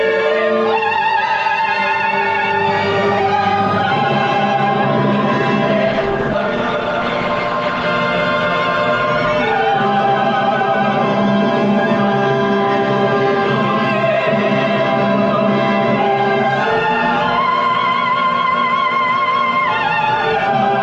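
From 5.86 s to 7.86 s the audio shifts abruptly to a lower-bitrate rendition of an adaptive stream, likely because the connection slowed. For those two seconds nothing is left above 9 kHz, the top end turns thin, and codec artefacts swell, which fits a drop from around 64 kbit/s Opus to around 16 kbit/s. Unlike a dropout or packet-loss glitch, there is no gap or silence: quality simply switches down and back with continuous playback.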